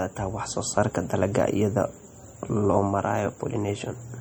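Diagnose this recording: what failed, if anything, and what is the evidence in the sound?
The codec stage is the weak point here: the speech carries a watery, swirly texture from start to finish, with s sounds going chirpy and metallic and consonant attacks smeared. That's likely MP3 compression, and the damage fits a starved bitrate around 48 kbps, with weak frequency lines flickering on and off frame to frame.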